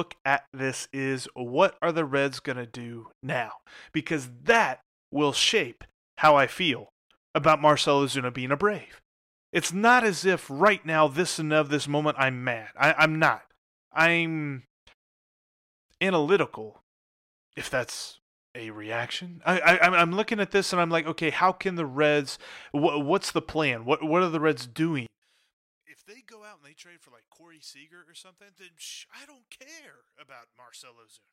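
From 25.06 s to the end, the speech suddenly collapses about 24 dB into a faint trace, likely one channel inverted, cancelling the centred voice when summed.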